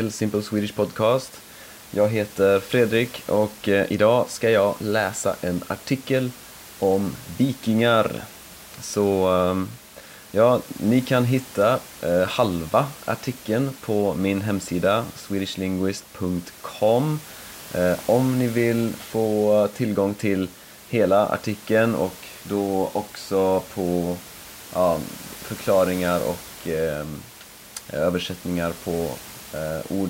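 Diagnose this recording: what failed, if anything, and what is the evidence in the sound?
Nothing in the recording points to a failure at any stage of the chain. The speech sits over a steady room noise about 20 dB below it, which belongs to the space where the microphone was and not to the system.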